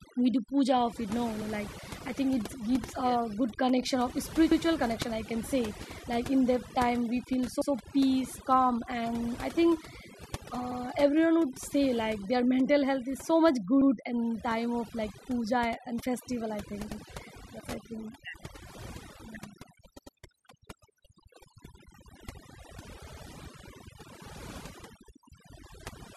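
From the start and throughout, overdone noise removal leaves the background near-silent but speckled with twinkling tones. Unlike a simple low-pass or gate, it strips individual frequency bands wherever they sit close to the estimated noise, taking quiet parts of the voice with them.

Overlapping chunks then cause a brief stutter at 4.52, 7.62, 10.72 (just before "everyone would say like"), 13.82 (before "in time of like"), 16.92 (between "and festival i think" and "that's i think"), 20.02 and 23.12 s. Each chunk of about 3 s begins 100 ms before the previous one ended, so that sliver plays twice. The strict 3.1-second regularity and the repeated material set it apart from dropouts, which leave gaps instead.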